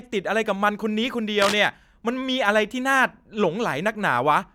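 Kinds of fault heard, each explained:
Cable scratch noise: from 1.42 to 1.66 s a dense, uneven scratching rides over the speech at nearly its level, likely a worn cable or connector shifting its contact resistance. Unlike an isolated click, it is a sustained, irregular crackle lasting a quarter second.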